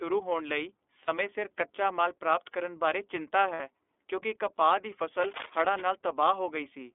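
The whole speech clip passes through the iLBC codec, confined to about 300 Hz to 3.5 kHz. The roughness and slightly synthetic edge, clearly audible, fit its 13.33 kbps mode with 30 ms frames. A plain band-limit would sound muffled but not grainy like this.

At 1.05 to 1.09 s (30 ms) and 3.53 to 3.61 s (60 ms), lost iLBC frames are concealed by repeating the last pitch cycle with added noise. The result is a brief held, buzzy vowel rather than silence or a click. Normal sound returns immediately afterward, because each frame decodes independently.

From 5.21 to 5.87 s, dense, irregular bursts of cable scratch noise ride over the speech, about 10 dB quieter than it. The likely cause is a worn cable or connector being moved. It is rustling and uneven, unlike steady hiss or isolated clicks.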